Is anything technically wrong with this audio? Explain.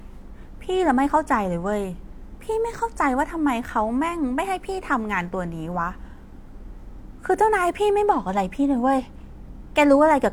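No, nothing technically wrong can be heard anywhere in this speech recording.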